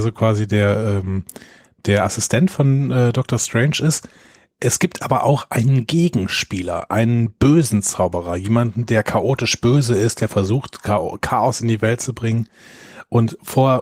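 No technical faults can be heard in this speech recording, whose full-band sound fits Opus voice compression in its hybrid mode with only light coding effects.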